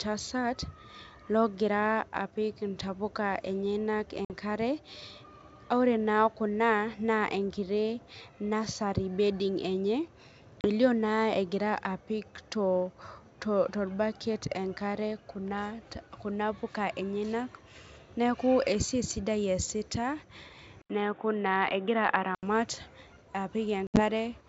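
Packet loss on an ADPCM call punches silent gaps into the speech at 4.25 s (50 ms), 10.61 s (30 ms) and 23.87 s, where 80 ms goes missing across 100 ms with a 70 ms longest run. The decoder's predictor and step size lose track during each gap, so the sound resumes with brief distortion before settling.

From 20.82 to 22.43 s an 80 ms silence is followed by audio cut off above 3.8 kHz, much duller than the surrounding wideband G.722 sound, at about the same level, with a faint new noise floor about 50 dB down. The likely cause is the input switching to a poorer device.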